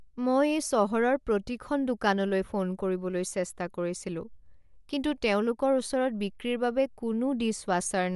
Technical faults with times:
0.00-8.15 Bluetooth LC3 compression

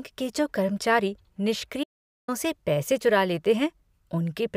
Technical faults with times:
1.84-2.28 audio dropout to silence

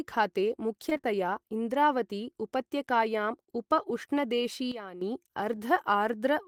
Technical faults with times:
0.89-1.05 repeated packet loss (robotic sound)
4.72-5.01 sudden gain jump
5.55-5.59 short concealed packet loss

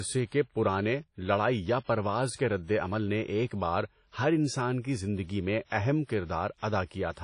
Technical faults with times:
0.00-7.23 WMA compression

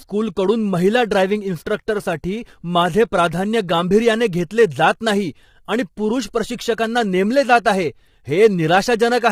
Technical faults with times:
0.00-9.32 low-delay AAC compression

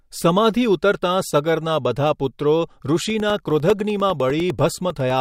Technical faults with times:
3.00-5.10 periodic USB or driver dropouts

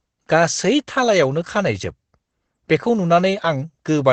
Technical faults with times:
0.00-4.13 Opus voice compression

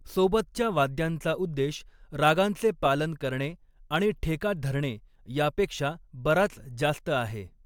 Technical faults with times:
none

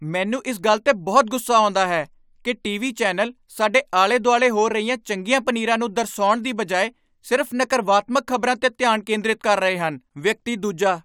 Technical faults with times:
none

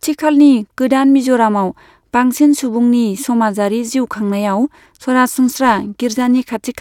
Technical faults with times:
5.43-6.80 periodic clock jitter

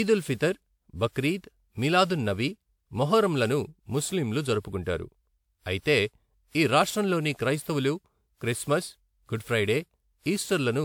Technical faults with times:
0.00-10.85 generation loss

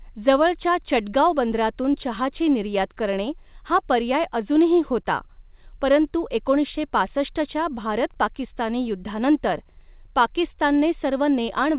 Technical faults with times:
none

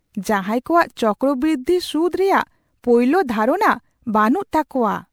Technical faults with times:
0.00-5.12 generation loss

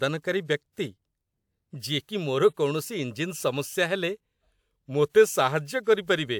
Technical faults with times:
none

